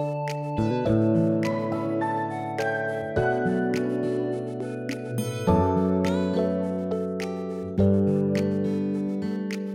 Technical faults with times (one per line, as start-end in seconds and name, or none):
none